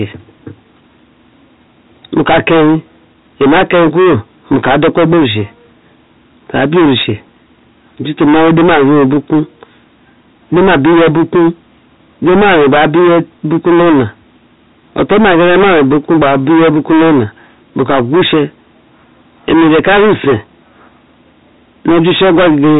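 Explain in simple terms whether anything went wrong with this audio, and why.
Yes, something went wrong. From the first second to the last, the speech has a harsh, buzzing fuzz on every loud syllable, not just an occasional crackle. That is hard clipping. The sound was pushed far louder than the recording stage could handle, so the tops of the sound waves were sliced off flat, on roughly a fifth of the audio. Those flattened peaks create the gritty distortion. The narrow, telephone-like tone is simply how a phone line sounds.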